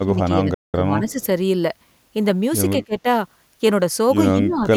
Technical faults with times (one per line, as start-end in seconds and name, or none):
0.03-1.20 speech suppressed in double talk
0.54-0.74 playback stall
1.07-1.26 echo leak
2.73-3.07 speech suppressed in double talk
4.32-4.72 speech suppressed in double talk